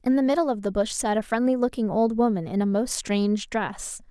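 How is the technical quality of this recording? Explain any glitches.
No glitches are audible anywhere in this speech recording, so there is nothing to explain.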